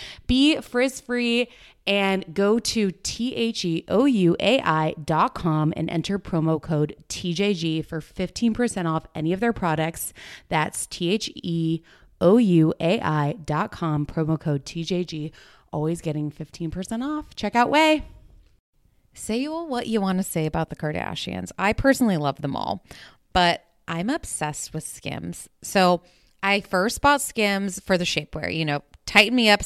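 No technical faults can be heard in this speech recording. Nothing along its length calls for a timestamp or a fix.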